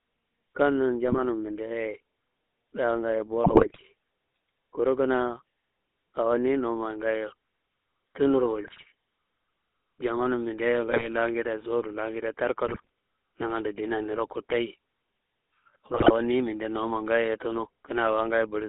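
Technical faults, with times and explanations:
Throughout, GSM full-rate codec: the speech has that buzzy, gravelly edge of pulse-excited vocal-tract coding, and it's plainly audible. The band sits at roughly 250 Hz to 3.6 kHz, and the texture fits the 13 kbps full-rate coder.
1.08–1.19 s, 3.44–3.83 s, 8.64–8.85 s, 10.88–11.09 s (right after "jamanum mindea"), 12.66–12.89 s (right after "sowudu langede"), 15.94–16.11 s, GSM bit errors: brief squawks and gargling bursts where corrupted filter, pitch or gain values warp the decoded frames. The longest, around 3.4 s, sounds like a heavier run of errors.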